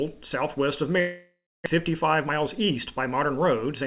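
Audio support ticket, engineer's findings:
Long network dropout, 1.0 to 1.68 s. Packet flow likely interrupted upstream. Receiver concealment extends the last sound as a fading buzz or hiss, decaying to near-silence for about 0.22 s. Roughly 0.4 s of audio never played. Playback resumes later, lost portion skipped, delay shifted by around a fifth of a second.

Jitter buffer speed-up, 1.76 to 3.82 s. Buffer overfilled after the stall, when held-back packets arrived in a burst. Receiver drains the excess by cutting short pitch-period-sized pieces repeatedly, around 150 ms removed in total. Audio runs about 7% fast at unchanged pitch and sounds hurried. The G.711 A-law call path keeps everything under 4 kHz throughout.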